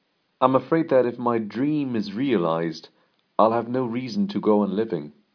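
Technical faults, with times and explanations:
No technical faults can be heard anywhere in the recording, and the signal holds steady throughout.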